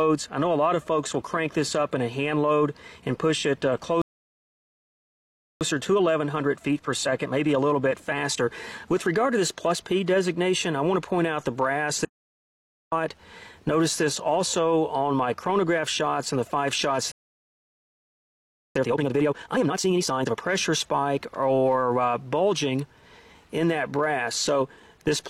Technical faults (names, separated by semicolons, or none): playback stall; time-compressed catch-up; audio dropout to silence